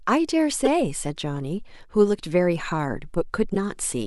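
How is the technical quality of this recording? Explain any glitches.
The recording has two brief glitches, both from damaged data in a compressed stream, at 0.65–0.67 s and 3.54–3.56 s. Corrupted bytes make the decoder misread frames and resync, giving a short chirp, squawk, click or hole.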